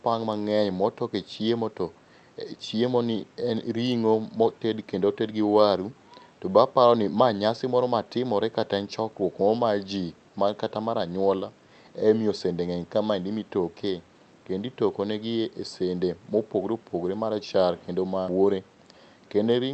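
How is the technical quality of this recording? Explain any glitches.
No glitches or faults are audible.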